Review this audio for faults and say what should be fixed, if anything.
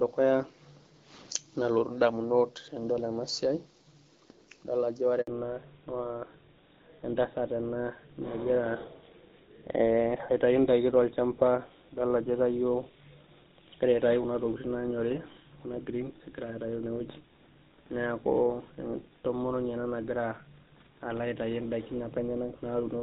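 A handover gap breaks the speech at 5.21 s and lasts 60 ms, until 5.27 s. The sound dies away within a few tens of milliseconds and stays silent while the call moves from one network link to the other, because no speech frames arrive during the switch. It differs from ordinary packet loss in two ways. There is no concealment buzz or repeated fragment, only clean silence, and the sound quality changes immediately afterwards. Configuring the network for make-before-break handover, so the new link carries frames before the old one drops, prevents the gap.

Fallback to narrowband begins at 5.27 s, right after the gap, and lasts to the end of the clip. Before it, the clear HD Voice sound of AMR wideband, which points to about 12.65 kbit/s with only light coding roughness, reaches up toward 7 kHz. After it, nothing remains above 4 kHz, and the speech turns duller and rougher. That fits an older full-rate GSM codec. 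A simple low-pass filter would leave the texture smooth, but this codec change also adds coarse, buzzy coding grain. Keeping wideband codecs negotiated on both networks across handover prevents the fallback.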